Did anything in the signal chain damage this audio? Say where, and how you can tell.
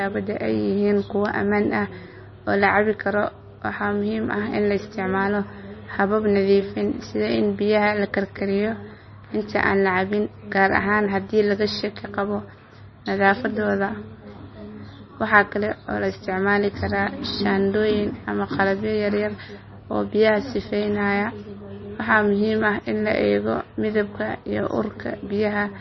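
Yes. The codec stage damaged this speech throughout, and MP3 compression is the likely cause. Nothing survives above 5.9 kHz, a hard treble cutoff. The sound is watery and swirly. Sibilants chirp metallically. That fits heavy damage at roughly 25 kbps, where starved frequency lines flicker between frames.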